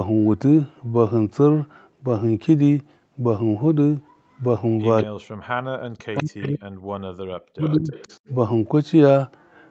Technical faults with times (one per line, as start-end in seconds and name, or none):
4.99-5.06 echo leak
5.04-5.28 speech suppressed in double talk
5.71-6.62 speech suppressed in double talk
6.17-6.49 echo leak
7.00-7.93 speech suppressed in double talk
7.61-8.19 echo leak